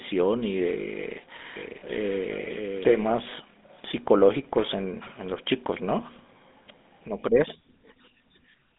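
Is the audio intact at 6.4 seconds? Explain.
No. At 6.4 s, as throughout the speech, the GSM full-rate codec damage is plainly audible, consistent with a 13 kbps codec. It rebuilds the voice from a vocal-tract model driven by a sparse, regularly spaced pulse excitation, giving a buzzy, gravelly roughness. On a spectrogram the energy sits in a band from 200 Hz to 3.6 kHz with an empty top and a coarse, smeared harmonic structure. The waveform looks pulse-like and grainy.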